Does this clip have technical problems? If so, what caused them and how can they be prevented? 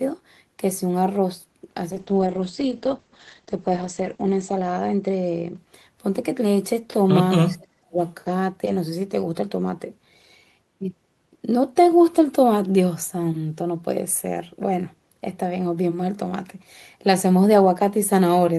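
Yes. There are three faults.

From 1.93 to 6.25 s there is a call bitrate drop. The encoder falls from 32 to 9 kbps for about two seconds at its lowest. Bandwidth shrinks from 20 kHz to 8 kHz, so the speech turns muffled and coarse. Prevent it with steadier network capacity and a higher minimum bitrate floor.

From 7.44 to 7.97 s the talker nearly vanishes, dipping by roughly 40 dB over about half a second. This is likely speech suppressed in double talk, with the echo canceller ducking both sides. Prevent it with an echo canceller that handles double talk better, or with a headset.

From 7.47 to 7.56 s a faint copy of the speech returns 316 ms late. This is likely an echo leak from a loudspeaker the canceller missed. Prevent it by using headphones or lowering the far-end speaker volume.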